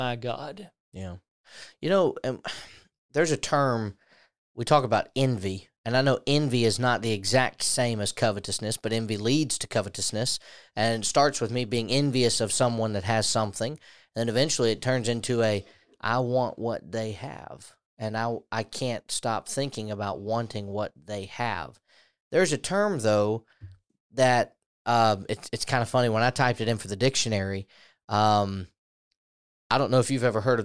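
No technical faults can be heard anywhere in the recording.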